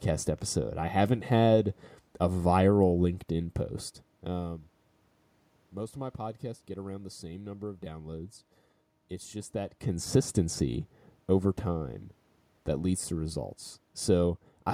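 Nothing stood out on listening; the steady room background and the shifts in level around four seconds and again near nine and a half, where the talker's distance from the microphone changes, belong to the recording itself.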